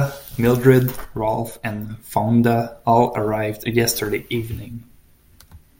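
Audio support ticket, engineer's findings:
One channel drops out, speech, 1.05 s to 1.90 s. Symptom: abrupt level step down of about 6 dB for roughly 0.85 s, then clean return. Waveform: envelope halves in amplitude with sharp edges at both ends. Spectrogram: whole band dims uniformly over that span, no spectral change. Mechanism: likely a lost stereo channel, so the mono sum carries only the surviving side, halving common content.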